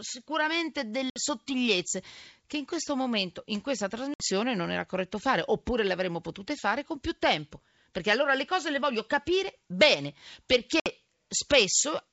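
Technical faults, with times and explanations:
1.10 to 1.20 s, 4.14 to 4.23 s and 10.80 to 10.88 s, packet loss on an ADPCM call: each time about 60 ms of audio, a few packets' worth, drops out as a hard-edged silent gap. The decoder's predictor and step size lose sync with the sender, so the speech comes back with some roughness, settling within a few tens of milliseconds.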